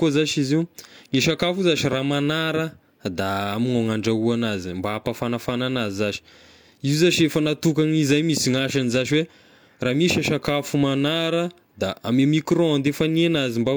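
Nothing in this speech recording stood out as a technical problem on listening.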